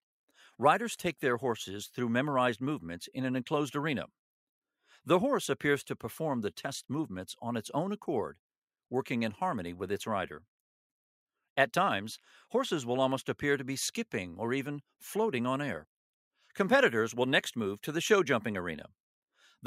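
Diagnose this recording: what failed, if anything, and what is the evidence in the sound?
Nothing in the signal points to a failure at any stage of the recording, transmission or playback chain.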